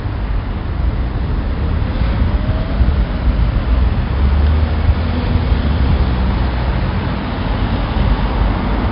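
From start to finish, the whole clip carries 4-bit ADPCM compression, and it's heavy. Each sample is coded as a small step from a predicted value, so the error rides along with the level: loud moments get a gritty hiss on top, and sharp attacks smear where the step size can't keep up. Nothing gets through above 5.3 kHz, which dulls everything and points to a low sample rate, with the grit fitting a stream around 44 kbps.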